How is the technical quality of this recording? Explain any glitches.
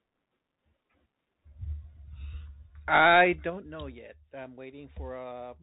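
The recording has two audible technical faults: narrowband headset coding throughout and a stepped level drop late in the clip.

Bluetooth CVSD headset codec, throughout: one-bit slope coding cuts everything above 3.8 kHz, leaving scratchy s sounds and granular hiss, unlike the smeary warble of lower-bitrate transform codecs.

Zipper noise, 3.16 to 3.76 s: the level falls by about 15 dB in unsmoothed 2 dB jumps, around ten per second, each leaving a small click. That ticking separates it from a smooth fade.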